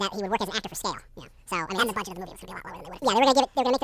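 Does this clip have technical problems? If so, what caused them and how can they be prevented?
Yes. There is a wrong sample rate throughout. The samples are clocked out at twice their capture rate, which fits 16 kHz material played at 32 kHz, so the speech runs double speed and a full octave higher. Matching the playback rate to the source, or resampling first, prevents this.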